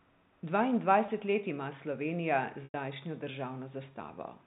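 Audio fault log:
1.06–1.08 s, packet loss with pitch repetition: a 20 ms gap right before "let ima" gets patched by replaying the last pitch cycle, so you hear a tiny held buzz instead of a dropout. That's consistent with a single lost packet on the telephone-band G.711 stream.
2.64–2.74 s, packet loss with pitch repetition: a longer 100 ms hole, roughly five packets' worth. The repeated cycle can only stretch so far, so it fades toward silence before the audio cross-fades back in.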